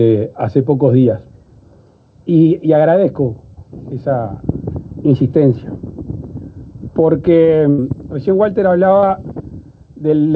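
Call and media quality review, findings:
Burst of packet loss, 7.70–7.80 s: last sound held and faded for about 80 ms, then audio resumes further on. Jitter buffer/PLC. Longer fade and skipped content set it apart from a brief glitch.

Short concealed packet loss, 9.00–9.04 s: brief smear, about 20 ms missing, filled for 25 ms, then blended back. Decoder PLC. Shorter than the burst at 7.7 s. Band stops at 8 kHz, consistent with G.722 at 64 kbps.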